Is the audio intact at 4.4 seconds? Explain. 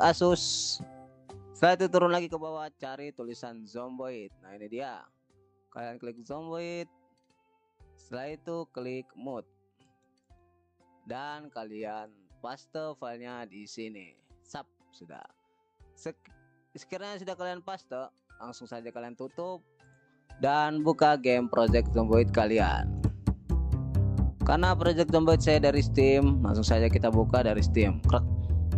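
Yes, at 4.4 s the audio is intact, with no dropout, distortion or other fault at that moment.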